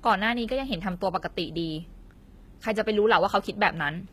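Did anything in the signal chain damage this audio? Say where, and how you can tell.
Yes, at the codec stage, across the whole speech clip. The treble sounds bright but artificial: sibilants come out gritty and metallic or lispy, and their upper harmonics don't sit naturally over the lower band. That points to HE-AAC compression as the likely cause, at plainly audible strength, which fits a bitrate around 20 kbps. The coder transmits only the lower spectrum and rebuilds the top by copying lower bands upward under a coarse envelope. Unlike a plain low-pass or ordinary low-bitrate MP3, the treble hasn't vanished. It is synthetic.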